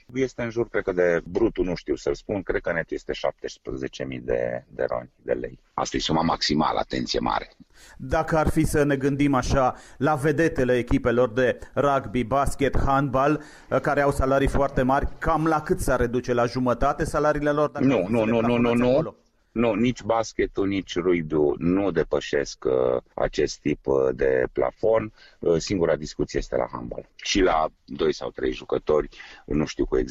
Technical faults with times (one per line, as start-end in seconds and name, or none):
none